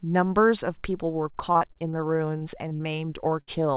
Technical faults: repeated packet loss (robotic sound); jitter buffer slow-down; short concealed packet loss; burst of packet loss

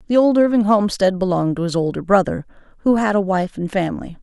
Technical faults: none

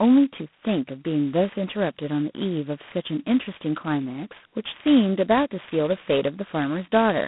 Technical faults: G.726 ADPCM

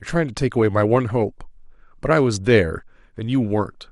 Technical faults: MP2 compression

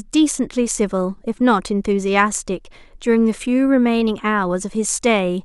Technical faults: none

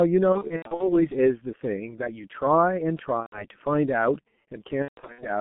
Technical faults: G.723.1 codec; VoIP packet loss concealed by the speech codec

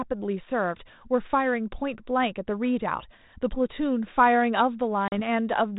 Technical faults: packet loss on an ADPCM call

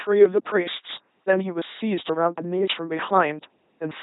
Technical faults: LPC-10 vocoder

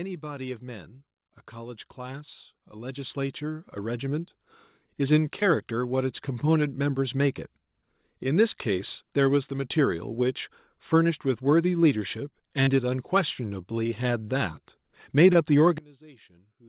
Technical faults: automatic gain rising; short concealed packet loss; one channel inverted

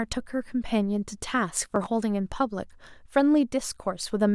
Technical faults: processor overload crackle

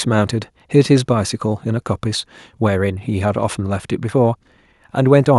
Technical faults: none

